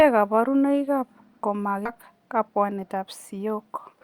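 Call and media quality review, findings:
Skip ahead, 1.85–1.87 s: about 0.7 s of speech missing, joined nearly seamlessly with no silence or fill. Jitter buffer likely discarding queued audio on overflow. Unlike packet loss concealment, no smeared or repeated filler bridges the hole.

Jitter buffer speed-up, 1.95–3.47 s: speech hurried, around 7% fast, pitch unchanged, roughly a tenth of a second trimmed through repeated pitch-period cuts draining excess delay. Unlike resampling drift, pitch stays put; unlike a skip, the loss is spread thin.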